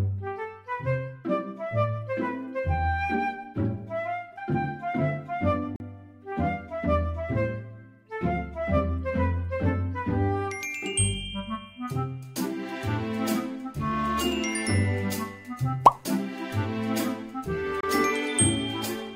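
A short, hard-edged dropout to silence cuts the sound at 5.76 s for about 40 ms, and a second, briefer one at 17.81 s lasts about 27 ms. Both are gaps between stream segments: where one 6-second segment ends and the next begins, their timestamps leave a small hole, and the player fills it with silence. Nothing is lost; the sound resumes where it left off, just slightly later.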